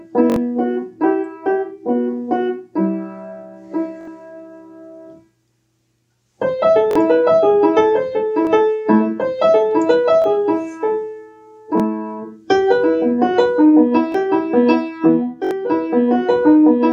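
The audio has a repeated buffer fault at eight points: 0.30–0.36, 4.01–4.08, 6.91–6.96, 8.45–8.47, 10.22–10.24, 11.78–11.80, 14.12–14.14 and 15.45–15.51 s. Each is a short stutter. One slice of about 21 ms, which fits a 1024-sample buffer, plays again with a hard join. The worst events repeat it three extra times and lose about 70 ms of audio. Single repeats lose about 20 ms. New data arrived late, so the device replayed its last buffer.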